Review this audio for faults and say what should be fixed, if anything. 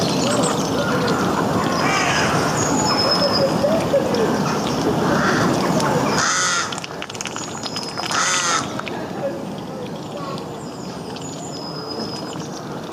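Gain pumping runs throughout: level swings by around 15 dB, likely from a fast limiter clamping an overdriven input, leaving a flattened, squashed waveform envelope. Lower the input gain so the limiter seldom acts.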